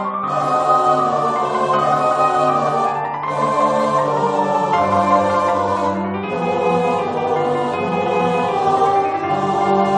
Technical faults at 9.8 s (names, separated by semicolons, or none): none